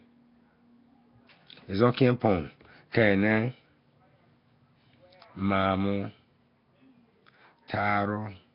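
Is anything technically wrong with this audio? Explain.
Yes. Throughout the speech there is heavy coding damage of the kind left by Nellymoser compression, likely from the Flash-era Asao codec at a low rate near 22 kbps. Starved bands are noise-filled, giving a rough hissy halo and smeared, underwater quality, with nothing above 5.3 kHz.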